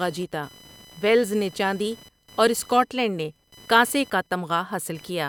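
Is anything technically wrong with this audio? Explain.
Yes. Computer activity noise runs through the entire speech clip. Load changes in the processor, graphics card or mouse shift the ground shared with the audio circuitry, and those fluctuations leak into the signal. Here it takes the form of a pulsing buzz at a rate of roughly 1 kHz, sitting around 25 dB below the speech. Its texture varies with what the computer is doing, not with the talking, so it persists under pauses as well.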